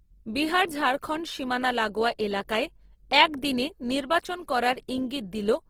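Across the whole speech clip there is plainly audible grain and roughness: sustained sounds turn noisy and coarse rather than clean, yet the spectrum stays full, reaching about 20.2 kHz with no obvious gaps. That points to Opus compression, likely in its CELT music mode at a rate fitting about 16 kbps, where starved bands are filled with noise or folded copies of lower bands. Unlike MP3 damage, it swirls and warbles less.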